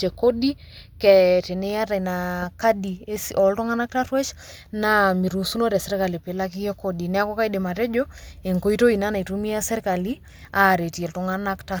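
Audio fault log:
No faults heard.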